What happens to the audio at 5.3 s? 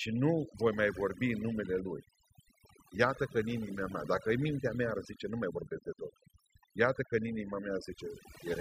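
At 5.3 s the speech carries overdone noise removal, which runs through the whole clip rather than starting there. A noise reduction stage set far too aggressively is pulling individual frequency bands down hard wherever they sit close to its noise estimate, taking the quieter parts of the voice with them. The gaps fall to near silence dotted with twinkling specks.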